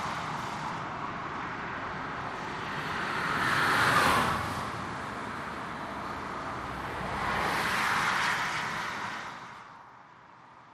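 Nothing stood out on listening to this recording of sounds.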